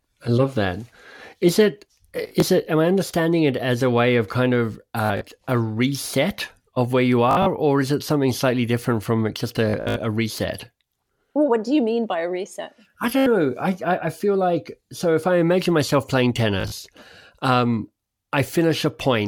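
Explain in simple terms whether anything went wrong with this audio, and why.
The wireless link between the source and the listening device dropped or delayed short bursts of data six times, causing Bluetooth stutter. Each time, the receiver filled the gap by replaying its last tiny slice of sound, so the speech briefly buzzes or machine-guns before jumping ahead. This happens at 2.24–2.42, 5.06–5.21, 7.31–7.46, 9.70–9.96, 13.19–13.26 and 16.61–16.79 seconds. The longest, near 9.7 seconds, loses about 170 milliseconds of speech.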